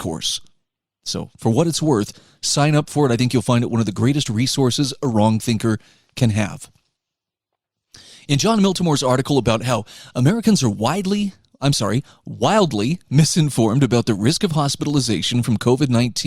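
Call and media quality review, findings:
Clock drift buffer slips: regular clicks every 1.09 s from 0.68 s to 15.99 s, about fifteen in all, audible over speech. Likely mismatched device clocks, off by roughly 150 ppm, each slip dropping or repeating a handful of samples. Spectrogram: evenly spaced thin vertical broadband lines. Waveform: small step discontinuities at each slip.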